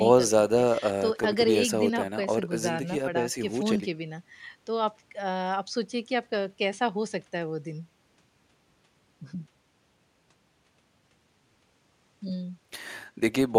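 No technical faults can be heard anywhere in the recording. Only the room's own background noise sits underneath the speech, about 43 dB lower.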